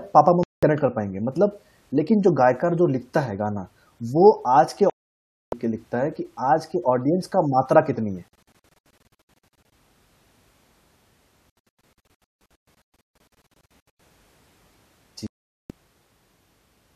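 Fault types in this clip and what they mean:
Digital broadcast dropout: the receiver lost good frames and muted. The speech falls silent five times, some gaps solid, two broken into many short holes.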